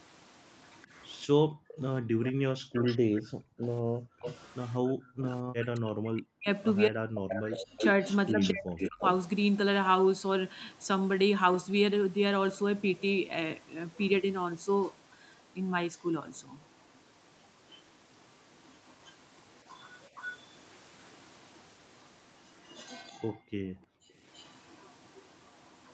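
A speech recording from a call carries three kinds of echo-canceller fault. An echo leak runs from 0.0 to 5.28 s, with a delayed copy about 254 ms behind and well below the direct speech, and again from 7.3 to 9.1 s, where a copy 326 ms late sits nearly as loud as the talker. From 16.65 s to the end, a faint copy trails by the same 326 ms. The likely cause is a far-end loudspeaker whose canceller let residual echo return. On a spectrogram these show as ghost repeats of the speech harmonics shifted right in time. Background gated by the echo canceller dips the room sound between 1.35 and 5.2 s and between 23.13 and 24.18 s, by up to about 40 dB and for roughly a second or more in total each time, because the microphone was clamped while the loudspeaker played. The waveform's noise floor collapses to near silence in those spans. Speech suppressed in double talk appears between 3.81 and 9.04 s, where the talker's voice drops deeply or cuts out in pieces for around three seconds in total while the other side speaks over it. 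This is probably the canceller failing to separate the two voices. On a spectrogram the speech energy thins or breaks into gaps below the call band's 8 kHz ceiling.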